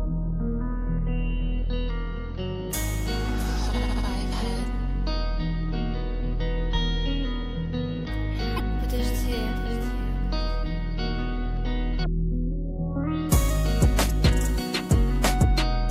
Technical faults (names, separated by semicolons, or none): damaged data in a compressed stream